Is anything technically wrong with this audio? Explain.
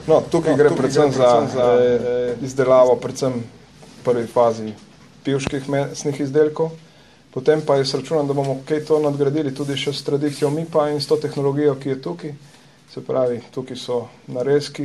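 Yes. From 0.36 s to 2.88 s the sound has a doubled audio track: a second, full-band copy trails the original by roughly 0.4 s, about 5 dB quieter. It carries no decay or room colour, so it reads as a flat, detached repeat rather than an echo, and it cuts in and out abruptly at those times. The likely cause is the same signal being captured a second time through a slower path.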